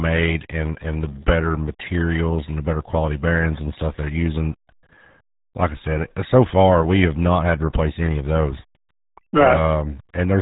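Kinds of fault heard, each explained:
RealAudio 14.4 codec: Throughout the speech, the sound carries the heavy damage of RealAudio 1, a low-rate speech coder built for dial-up modem streaming, and the degree of coarseness fits an 8 kbit/s stream. The coder discards the upper band entirely, so nothing is heard above 3.8 kHz, which leaves the speech muffled. Its crude modelling of the signal at such a small data budget adds a gargling, bubbly texture to the speech.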